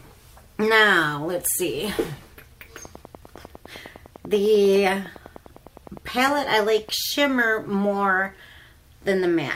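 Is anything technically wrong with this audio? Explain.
Yes. A train of clicks runs from 2.85 to 6.90 s: about 40 near-identical pulses at a regular 9.9 per second, peaking roughly level with the sound, likely from interference or a faulty connection or power supply, heard as steady ticking over the audio and through pauses.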